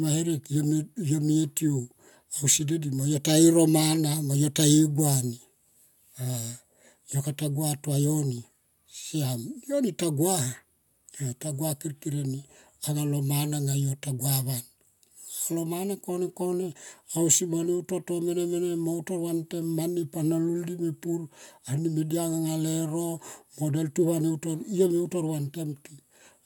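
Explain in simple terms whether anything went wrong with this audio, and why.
Nothing went wrong with this speech recording. No moment in it stands out as a technical problem, so there is nothing to point to or explain.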